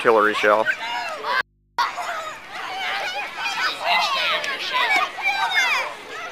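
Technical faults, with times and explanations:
1.41–1.79 s, audio dropout to a faint residue: the sound cuts off abruptly mid-flow and for about 0.38 s only a low mains hum remains, roughly 40 dB below the normal level, before the signal snaps back just as suddenly. There is no fade at either edge, so it is not a natural pause. The wanted signal was likely lost upstream while the input stayed open and live, leaving the hum of that open input audible through the gap.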